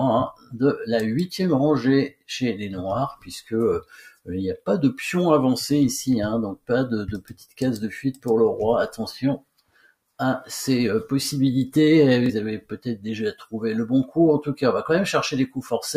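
Throughout the clip the level pumps and thins, with held sound and tails sinking by around 10 dB while attacks pass. This is a noise suppressor applied to music or sounds: a speech-tuned suppressor left on treats steady content as noise and keeps pulling it down.

Deeper dips mark sound cut by the noise suppressor at 0.33 to 0.56, 2.09 to 2.29, 3.16 to 3.53, 3.81 to 4.29, 7.21 to 7.61, 9.38 to 10.19 and 13.34 to 13.55 s. Each is a brief hollow sag of about 15 to 21 dB, where sustained or fading sound was judged to be noise and clamped harder than its surroundings.

From 12.26 to 12.30 s there is a quick hiccup as a slice of about 23 ms repeats before the audio resumes. This is Bluetooth stutter. A late or missing packet, which fits a single lost frame, made the receiver replay its last buffer.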